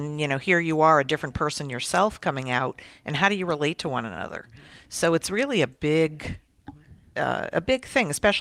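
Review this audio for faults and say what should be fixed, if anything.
No faults; nothing to fix.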